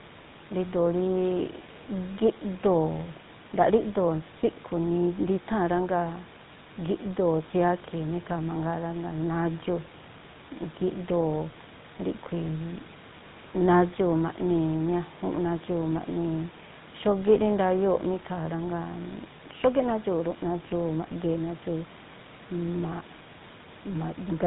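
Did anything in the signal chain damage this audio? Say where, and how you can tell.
Yes: the codec stage, across the whole recording. A GSM full-rate codec rebuilds the speech from a vocal-tract model driven by sparse, evenly spaced pulses, which fits a 13 kbps link. Everything above 4 kHz is lost, and the speech takes on a plainly audible buzzy, gravelly roughness. The room noise, about 23 dB below the speech, belongs to the recording itself.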